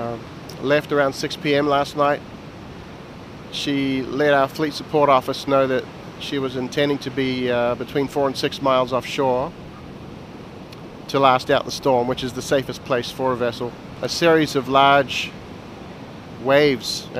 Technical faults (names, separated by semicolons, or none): periodic USB or driver dropouts